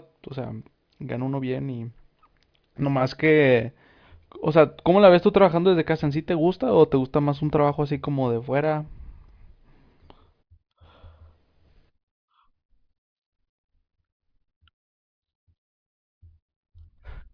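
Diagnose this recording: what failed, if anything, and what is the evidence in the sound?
Nothing failed; no stage leaves an audible trace here.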